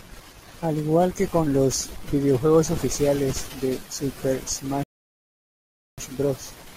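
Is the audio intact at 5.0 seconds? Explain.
No, at 5.0 seconds you're sitting inside a rebuffering stall that runs from about 4.83 to 5.98 s. The player ran dry of downloaded audio, so the speech just drops to silence and hangs there until enough data shows up, then picks up exactly where it left off. Nothing gets skipped, but that gap adds roughly 1.14 s of dead air to the clip.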